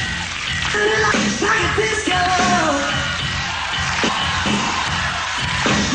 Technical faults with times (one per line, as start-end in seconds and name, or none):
0.74-1.49 chunks out of order
4.09-4.83 chunks out of order